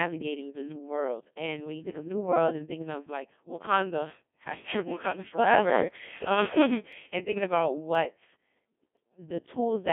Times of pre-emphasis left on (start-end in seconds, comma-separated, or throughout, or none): none